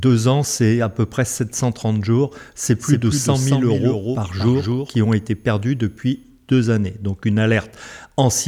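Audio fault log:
2.63–5.13 s, doubled audio track: the sound is likely being captured a second time through a slower path and mixed back in. A full-band copy follows roughly 200 ms behind the original, some 5 dB quieter, so every onset gets a distinct trailing repeat. The copy has no reverberant tail or room colouring, and it cuts in abruptly at 2.63 s and drops out just as abruptly at 5.13 s.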